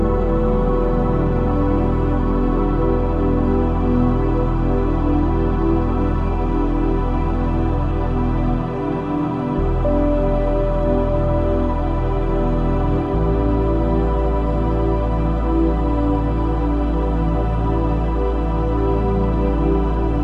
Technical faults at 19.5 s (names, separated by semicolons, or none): none